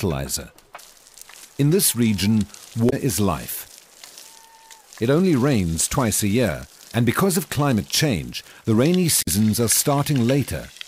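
At 2.86 to 2.93 s and again at 9.18 to 9.28 s, damaged data in a compressed stream breaks the decoding. Corrupted bytes make the decoder misread frames and lose sync until it finds a valid header, so each 70 to 90 ms stretch comes out as a brief squawk or blip. On a spectrogram these appear as narrow vertical smears of garbled energy, and the waveform shows an abrupt, jagged discontinuity at each spot.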